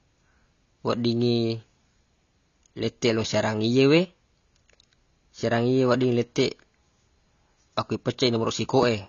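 Throughout this speech recording the sound is dull and smeared, with nothing above 7 kHz and a warbling, fizzy edge on sibilants. This is likely AAC compression, with AAC-LC at a low bitrate, consistent with around 24 kbps, cutting the top band and thinning the spectrum.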